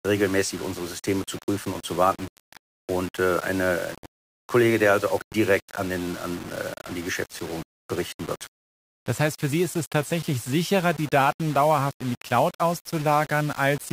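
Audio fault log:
throughout: low bit depth without dither. The speech carries a coarse, gritty roughness that follows the voice, with a granular noise floor only about 20 dB below the speech. The grit thickens as syllables fade, and the quietest stretches collapse to silence or crackle between two levels. The likely cause is samples rounded to very few steps with no dither, which fits about a 5-bit resolution, so the error tracks the signal.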